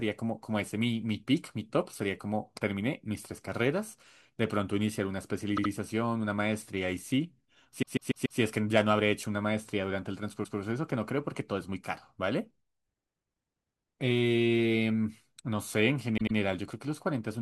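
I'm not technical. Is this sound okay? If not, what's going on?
No. The speech has repeated frames: a tiny piece replays like a stutter at 5.56, 7.81 to 8.39, 10.43 and 16.17 seconds, sometimes with small clicks.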